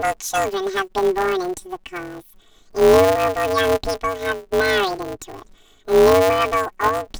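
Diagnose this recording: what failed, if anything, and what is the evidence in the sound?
The failure is at the sample-format conversion stage: planar audio read as interleaved. Throughout the speech, a robotic buzz sits on the sound with no clear octave shift. Each 5.33 ms block, which fits a 256-sample planar block, gets played as a sped-up left half and then a right half, chopping the signal at 188 Hz. On a spectrogram this shows as a 188 Hz line with harmonics and sidebands. The waveform shows a seam every 5.33 ms.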